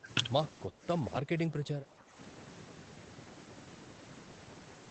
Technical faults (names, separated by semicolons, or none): speech suppressed in double talk